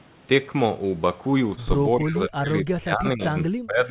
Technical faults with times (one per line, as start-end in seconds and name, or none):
1.55-1.60 short concealed packet loss
1.94-3.90 speech suppressed in double talk